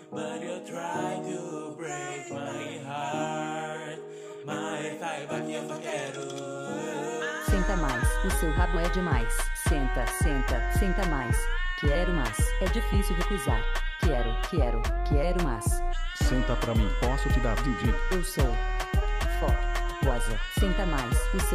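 No technical faults can be heard anywhere in the recording. Nothing in it calls for a timestamp or a closer look.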